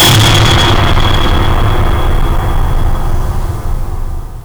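This music clip is hard clipped from start to finish. It is driven about 29 dB past what the signal path can pass, so nearly a third of the waveform is flattened at the ceiling. Those squared-off peaks add dense high harmonics, heard as harsh fuzz on everything loud.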